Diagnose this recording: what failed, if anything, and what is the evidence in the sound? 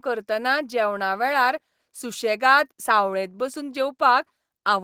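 Nothing stood out on listening to this speech recording; no stage of the chain gave any audible sign of failure.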